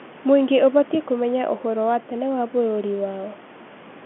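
The speech comes over a standard telephone channel, band-limited to roughly 200 Hz to 3.4 kHz with nothing above about 3.8 kHz, as expected from G.711 mu-law coding at 64 kbps, and room noise sits about 20 dB below the voice.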